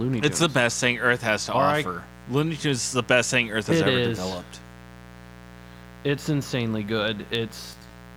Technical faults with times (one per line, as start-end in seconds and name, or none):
0.00-8.16 mains buzz
7.73-7.90 frames out of order